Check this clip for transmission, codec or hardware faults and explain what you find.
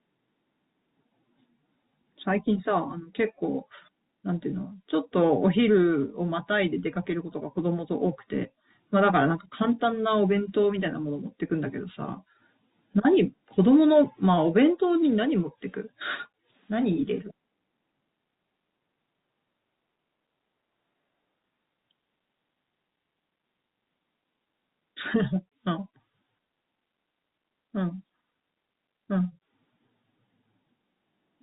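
No faults found in this speech; it is ordinary G.711 telephone-band audio with nothing above about 3.8 kHz, as expected for that format.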